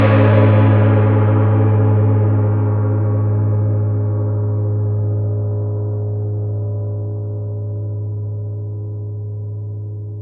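Nothing in these sounds comes across as a technical fault. There's nothing to flag anywhere along the way.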